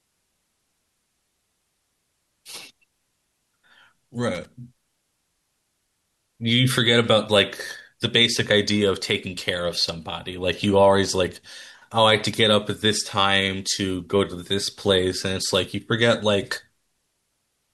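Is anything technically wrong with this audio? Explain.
Yes. From 4.35 to 4.45 s the speech is hit by loose connector crackle: a worn contact making and breaking chops the signal, producing a brief irregular burst of scratchy crackle.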